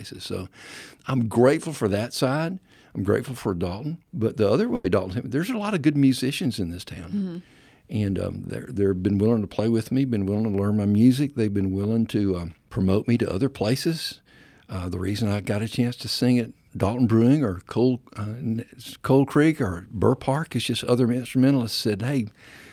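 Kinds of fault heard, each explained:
Burst of packet loss: from about 4.75 to 4.90 s, several packets of the speech stream in a row arrived too late or not at all. The receiver spent about 90 ms stretching the last good sound, letting it fade as a held buzz or hiss, then jumped ahead with about 80 ms of speech gone. A plain dropout falls to silence. Here the gap is filled with a decaying copy of what came just before.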